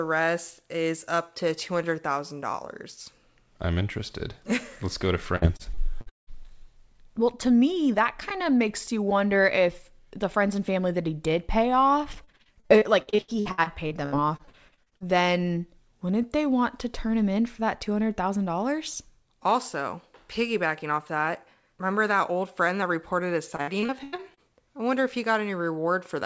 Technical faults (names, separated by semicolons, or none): repeated packet loss (robotic sound)